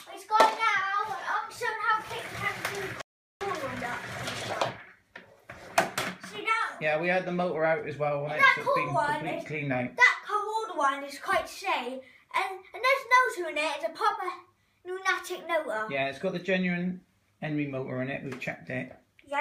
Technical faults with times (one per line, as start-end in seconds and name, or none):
3.01-3.41 rebuffering stall